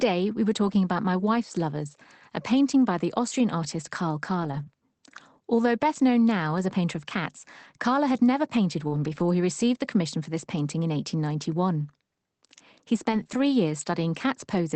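Packets were lost at 0.63 to 0.77 s and 4.43 to 4.61 s, and each was replaced by the low-bitrate copy the next packet carried. This is a lost packet rebuilt from error correction. The 80 ms and 100 ms of rebuilt audio play without a gap but sound rougher and noisier, which fits about four and five missing packets.

At 4.63 to 4.68 s a short concealed packet loss follows. About 20 ms never arrived, so the decoder extended the preceding sound and blended back in, leaving a brief smear.

After "had never painted", 8.88 to 8.94 s is concealed the same way over 40 ms, producing a wobble. From 8.92 to 9.22 s, up to "he received the commission", a longer 160 ms stretch is rebuilt from error correction and sounds grainy and noisy, consistent with roughly eight lost packets.

Near the end, 13.12 to 13.22 s is rebuilt from error correction, giving 60 ms of rougher sound. At 13.24 to 13.27 s, about 20 ms goes missing and is concealed as a quick smear. 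Then 13.27 to 13.37 s is rebuilt again, another 60 ms of noisier, coarser audio.

Throughout, the Opus call path at 24 kbps cuts the sound off above 8 kHz.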